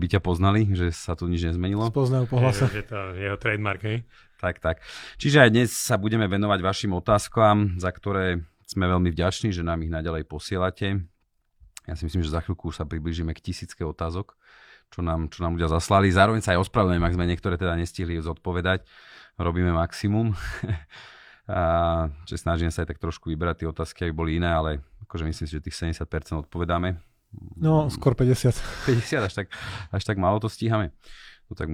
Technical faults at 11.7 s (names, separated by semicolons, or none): none